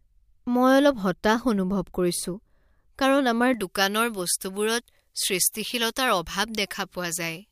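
A speech clip in which pre-emphasis is left on from 3.54 s to the end: treble sits about 11 dB hot at 10 kHz, fitting uncorrected J.17 emphasis, and the spectrogram's upper bands brighten abruptly there.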